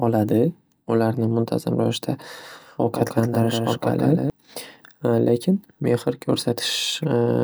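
A second capture path or a misaligned edit likely mixed the same signal in twice, producing a doubled audio track from 2.40 s to 4.30 s, just after "muntazam ravishda". A full-band copy trails the original by roughly 150 ms at about 5 dB lower level, giving a distinct slapback echo on the speech with no reverberant tail or room colour. The copy appears abruptly at 2.40 s and drops out just as suddenly at 4.30 s.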